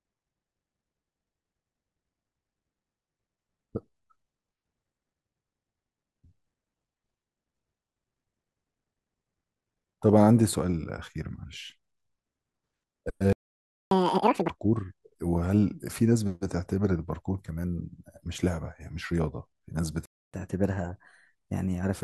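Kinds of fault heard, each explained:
playback stall: The speech stops dead from 13.33 to 13.91 s, about 0.59 s of silence, and again from 20.06 to 20.34 s, about 0.28 s. The likely cause is the player running short of buffered data or its output thread being held up. A dropout removes a slice of audio, but here the speech picks up exactly where it broke off, so nothing is lost, only delayed.
catch-up at higher speed: Right after each stall the speech rushes to win back the lost time. From 13.91 to 14.50 s it runs at 2.0 times normal speed, raised by roughly ten semitones, which gives a chipmunk quality. From 20.34 to 21.93 s the push is gentler, at 1.15 times with about two semitones of rise. Tempo and pitch climb together and then settle back, which sets it apart from a plain pitch shift, where the timing stays unchanged.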